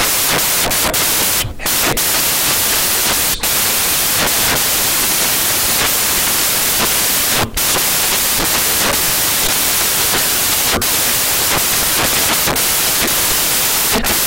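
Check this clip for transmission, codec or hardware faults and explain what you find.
One fault runs through the whole recording: samples built from the wrong bytes, from start to finish. The bytes of each sample are assembled in the wrong order or alignment, so the rapidly changing low bits become the dominant part of every value. The speech is buried under loud, harsh noise, close to white on the louder sounds.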